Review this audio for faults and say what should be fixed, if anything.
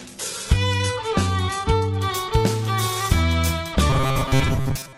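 The first 2.0 s show an adaptive stream starting at a low bitrate: thin, treble missing or synthetic, consistent with an HE-AAC-style low tier, then a sudden, gapless jump to full quality. Starting a tier higher, or prefetching a better segment, would avoid it.

From 3.90 s to the end there's a robotic sound, likely from repeated short buffers: a metallic 133 Hz buzz, pointing to roughly 7.5 ms chunks replayed most of the time. Larger playback buffers or proper loss concealment would fix it.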